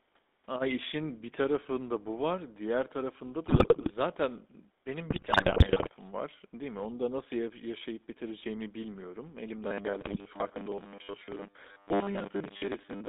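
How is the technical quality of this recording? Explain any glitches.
The recording is poor, with a codec limitation throughout and several audible glitches.

The GSM full-rate codec runs throughout. Voice modelling with sparse pulse excitation and a band of 250 Hz to 3.7 kHz, consistent with 13 kbps, leaves the speech buzzy and gravelly.

GSM bit errors occur at 3.46 to 3.91 s (after "bu var diğer tarafında"), 5.10 to 5.91 s, and 10.01 to 10.16 s. Corrupted filter, pitch and gain values produce squawks, pops and gargling bursts.

Robotic sound from repeated short buffers begins at 9.64 s, after "ya yaşayıp bitireceğimi bilmiyorum", and lasts to the end. A rigid metallic 100 Hz buzz, likely from about 10 ms chunks being replayed, replaces roughly half the audio.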